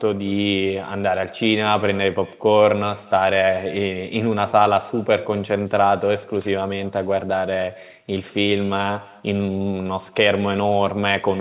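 From start to finish, the speech carries an echo with no canceller. The far end's loudspeaker feeds its microphone and nothing removes that path, so each phrase returns about a fifth of a second later, about 23 dB down, and thin. A spectrogram shows every syllable followed by a faint, time-shifted ghost, and the waveform shows small trailing copies. Throughout, the call path cuts everything above 4 kHz, which fits a narrowband G.711 codec.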